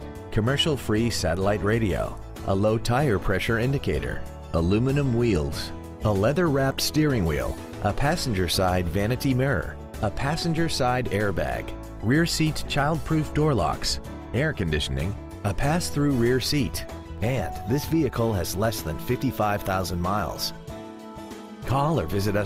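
No technical faults occur at any point in the clip, so there is nothing to place in time order.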